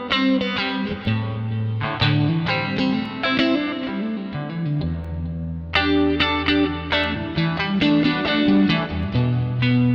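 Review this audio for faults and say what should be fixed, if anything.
Periodic USB or driver dropouts occur every 2.0 s from 1.05 s to 9.03 s, about five ticks, each a roughly millisecond-long gap filled with silence. Their strict regular spacing, audible only under signal, separates them from irregular load-driven underruns. Prevent this by disabling the polling background task or moving the interface to a dedicated USB controller.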